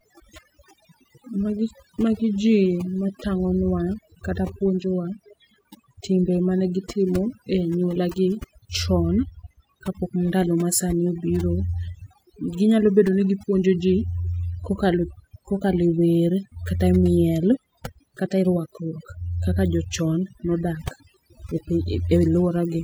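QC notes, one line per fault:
Throughout, overdone noise removal: the background drops and breaks up into twinkling specks, while the speech loses its soft edges and trailing sounds. A noise reduction process was pushed too hard, cutting individual frequency bands almost to nothing whenever their level sat close to its noise estimate, so the quieter parts of the voice were removed along with the noise, leaving isolated bands flickering on and off.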